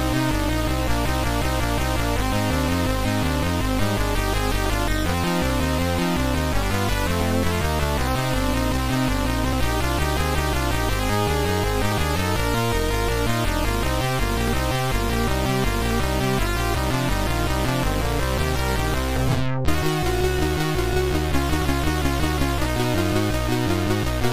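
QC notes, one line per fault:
2.03–22.84 s, clock drift buffer slips: a click every 3.47 s, likely two clocks about 100 ppm apart forcing slips of some fifteen samples.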